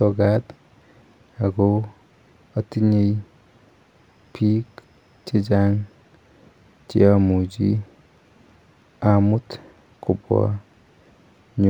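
A speech recording with imaging from linear upsampling throughout. The top end sounds dulled. Faint mirrored images sit between 12 and 24 kHz, about 50 dB down, adding slight metallic shimmer to sibilants. This points to a 24 kHz source raised to 48 kHz by straight-line interpolation.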